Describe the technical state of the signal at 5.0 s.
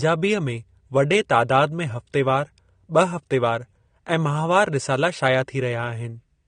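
At 5.0 s, as across the whole clip, the speech is dull with nothing above 9.7 kHz, and sibilants sound smeared and fizzy. That's likely AAC compression: AAC-LC at a low bitrate, around 32 kbps, cutting the top end and coarsely quantising what's left.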